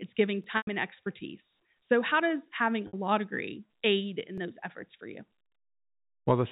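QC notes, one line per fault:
0.44 s and 4.38 s, repeated buffer: each is a tiny stutter, heard more as a click or a short hard-edged buzz than as an audible repeat. A slice of about 11.6 ms plays twice back to back, with an abrupt join where the copy begins. New audio did not reach the output in time, so the device played its last buffer again. The length fits a 512-sample buffer, and the repeat only pushes the audio later, so essentially nothing is lost.
0.57–0.67 s and 2.87–2.93 s, packet loss with pitch repetition: the sound freezes into a held, buzzy tone that fades away. A short silence follows, then the signal cross-fades back in. The receiver covered the missing stretch by looping the last pitch period and fading it over about 50 ms. Both gaps outlast that fade: the 100 ms gap fits about five packets and the 60 ms gap about three. That is why each gap empties out before recovery.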